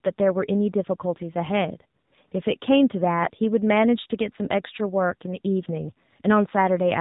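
Speech heard through the AMR narrowband mobile codec: a hard 4 kHz ceiling plus buzzy, synthetic timbre, unlike plain band-limiting, which fits a low rate such as 7.4 kbps. AMR comfort noise replaces the background at 2.00–2.12 s and 2.28–2.32 s: smooth, steady hiss switching in abruptly rather than a dropout's silence.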